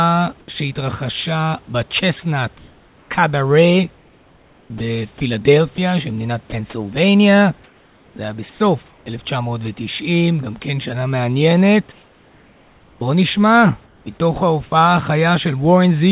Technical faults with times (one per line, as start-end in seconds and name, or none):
0.40-0.48 comfort noise in place of the background
0.46 onset clipped by the voice detector
2.58-9.06 sound chopped by the voice detector
11.92-14.72 comfort noise in place of the background
14.70-14.72 sound dropped by the voice detector